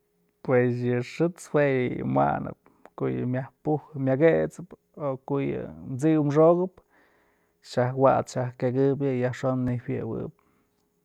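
Speech, with two repeated buffer glitches, at 7.69 s and 9.68 s. Each time the playback device didn't get fresh audio quickly enough and played its last chunk again, so a piece about 11.6 ms long sounds twice, with a hard join. That length fits a 512-sample buffer. At that size the doubling comes across as a quick click or tiny buzz rather than an audible stutter, and hardly any audio seems to be lost.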